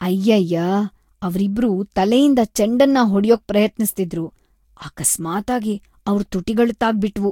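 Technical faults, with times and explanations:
Throughout: generation loss. The speech is swirly, hollow and smeared, with blurred consonant attacks and nothing above 16.6 kHz. This is likely about three Vorbis re-encodes near 65 kbit/s, each requantising on a shifted frame grid, so damage exceeds a single pass.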